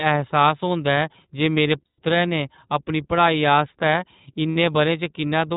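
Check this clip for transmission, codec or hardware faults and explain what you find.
Two faults are present: the whole clip has passed through the iLBC codec, and two short stretches of lost iLBC frames break into the speech.

Throughout, the speech was squeezed through iLBC, a narrowband VoIP codec that codes each frame's excitation on its own, and the artefacts are plainly audible. Everything above 4 kHz is gone, so sibilants and breath lose their edge, and the voice takes on a rough, slightly synthetic texture. The short-frame character fits the 15.2 kbps mode with 20 ms frames.

At 1.86 to 2.00 s, right after "जे मेरे", about 120 ms of packets went missing, and the decoder filled the hole by repeating the last pitch cycle mixed with noise. That gap comes out as a held, faintly buzzy vowel. Then "ने अपनी पढ़ाई आस्तै" arrives clean almost immediately, because each iLBC frame decodes without the one before it. 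A shorter 60 ms loss at 4.51 to 4.56 s, just after those same words, gives a brief buzzy smear of the same kind.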